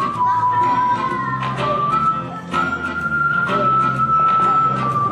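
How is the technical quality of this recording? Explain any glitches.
No glitches can be heard in this recording. Nothing in it points to a technical fault that needs explaining.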